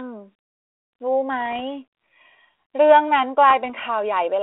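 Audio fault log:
1.40 to 1.60 s and 3.50 to 3.71 s, bit errors on an ADPCM link: a couple of short stretches of pops and rough, grainy bursts with little jumps in level, fitting an error rate somewhere around a tenth of a percent. Each flipped bit knocks the decoder's step size and predictor off track, so the damage rings on briefly before it settles. The phone-band sound around them, which fits 32 kbit/s G.726, carries only light coding grit.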